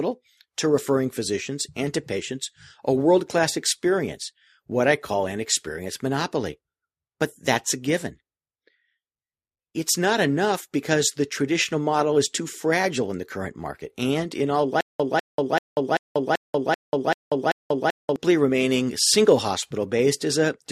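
From 14.81 s to 18.16 s the speech breaks into a stutter with silent gaps: one fragment of about 198 ms repeats eight times, each followed by roughly 189 ms of digital silence, giving an even cycle of about 387 ms. The mechanical regularity is what gives the pattern away. This is likely a playback or stream stall in which each retry replays the last buffered fragment and then runs dry, so the audio for that stretch is lost.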